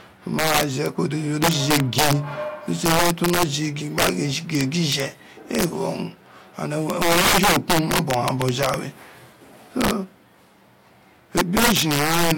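Speech clip with integer overflow throughout: the signal is driven about 12 dB past full scale, so roughly two percent of samples wrap to the opposite sign, producing harsh cracks on loud syllables.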